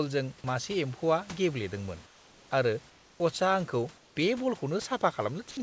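After "मासे एम्फौआ गेब्लेदोंमोन", at 2.06–2.51 s, then 2.90–3.20 s and 3.98–4.16 s, comfort noise in place of the background fills the pauses. This is likely from discontinuous transmission. It is a steady, featureless hiss about 3 to 5 dB quieter, and no speech is lost. At 5.51–5.57 s, sound dropped by the voice detector likely cuts about 30 ms of speech itself, which gives way to the same flat noise.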